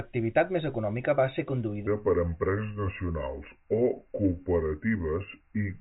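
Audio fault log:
1.87–5.80 s: section at the wrong speed. From 1.87 s to the end, the audio runs at 0.744 times its recorded rate, so everything is stretched out and drops about five semitones, the speech turning deep, slow and heavy from one moment to the next. Because speed and pitch move together, the likely cause is this stretch being played back against a mismatched clock, which fits a rate conversion applied to only part of the file. The band limit of the telephone-grade G.711 coding stays audible across the change.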